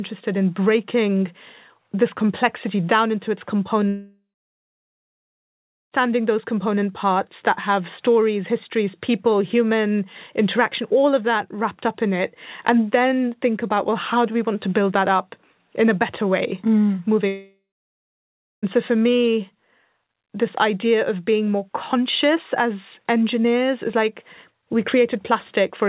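From 3.88 to 5.94 s, after "complexity down into its", and from 17.27 to 18.65 s, after "a better way mm", a long network dropout is likely: a short fading buzz or hiss, then silence until "those component parts that" and "so for me". Unlike a hard cut or brief packet loss, the concealment tail decays and sound is lost, all within the 4 kHz band of a G.711 call.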